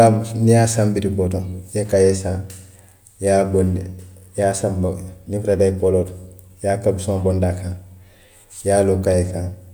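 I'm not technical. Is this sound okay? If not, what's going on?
Yes, nothing in this speech recording points to a technical fault.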